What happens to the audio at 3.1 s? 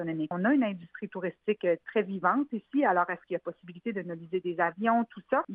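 Nothing goes wrong at 3.1 s; the audio runs through that moment intact, with no dropout, click, or other audible fault.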